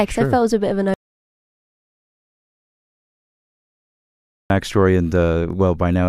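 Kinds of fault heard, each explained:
Audio dropout to silence: after "a bit of an" the sound drops to silence from 0.94 to 4.50 s, likely lost input; no room tone remains, unlike a natural pause.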